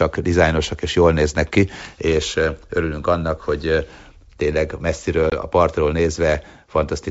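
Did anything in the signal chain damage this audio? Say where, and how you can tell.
Yes, at the network stage: packet loss on an ADPCM call. At 5.30 to 5.33 s a 20 ms hole, about one packet, cuts hard to silence, and the speech returns slightly distorted before settling within tens of milliseconds. That recovery tail is the tell. The decoder's adaptive predictor and step size drifted from the sender's over the missing packet, which a plain buffer dropout would not cause. The G.722 coding at 64 kbit/s adds at most faint damage.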